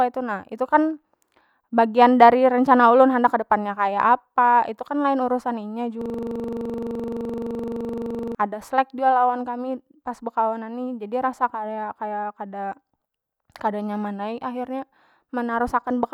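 From 6.01 to 8.35 s the speech freezes into a system hang loop: one 42.67 ms slice repeats exactly, giving a rough 23.4 Hz buzz, which fits a 2048-sample buffer. Unlike codec dropouts, the repeated slice never varies or fades.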